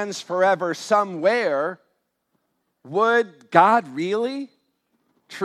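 No technical faults are audible anywhere in this speech.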